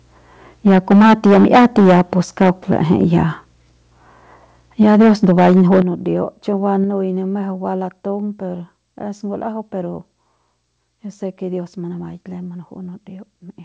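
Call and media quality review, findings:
Microphone overload at 0.66–2.13 s, 2.41–3.21 s and 4.81–5.8 s: harsh crackle on the loud peaks, likely input gain too hot. Peaks run about 13, 6 and 8 dB past the converter ceiling, so roughly a fifth of the first stretch is flattened.

Microphone volume stepped down at 0.68, 4.83, 5.82 and 6.84 s (the last just before "ne mejeu"): sudden level drops of about 2, 2, 9 and 4 dB, likely call-side auto gain reacting to the clipping.

Nothing above 8 kHz, which fits a G.722 call path.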